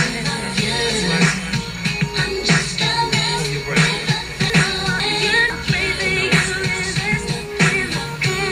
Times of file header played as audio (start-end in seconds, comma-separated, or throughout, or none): none